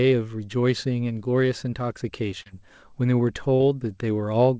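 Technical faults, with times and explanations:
2.42–2.48 s and 3.56–3.62 s, short concealed packet loss: each time about 40 ms of the call missed the decoder, so the receiver stretched the preceding speech, from its pitch or as shaped noise, then blended back, heard as a brief smear or wobble.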